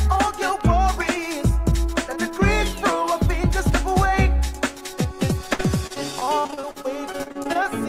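Repeated packet loss (robotic sound) runs from 5.53 to 7.67 s. Around twenty short holes follow in quick succession, the longest about 58 ms, each patched by extending the preceding sound. Roughly a quarter of that stretch is filled this way, leaving choppy audio with pieces missing.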